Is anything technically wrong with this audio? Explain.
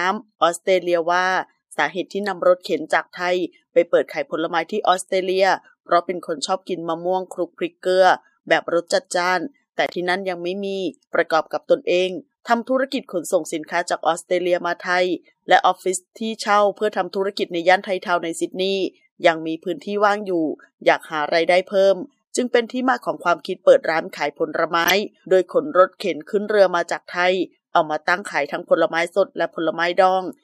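Yes. There's a corrupt frame decoded at 4.92, 9.86 and 24.84 s: damaged compressed frames got played anyway, misplacing energy across frequencies. Each is a brief glitch, and the last one is the strongest.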